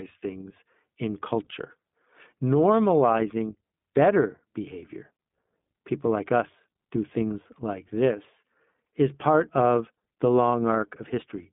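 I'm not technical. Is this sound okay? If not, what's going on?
No. The whole clip has passed through the iLBC codec, a phone-call voice compressor. It cuts out everything above about 3.8 kHz, so the speech sounds muffled and thin. Each short slice, likely 20 ms, is rebuilt separately, leaving a rough, slightly robotic edge.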